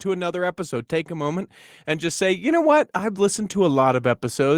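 From 0.55 s, just after "to another", the speech and background swell together by about 7 dB until 3.39 s: automatic gain rising, as the control slowly boosted a quiet input.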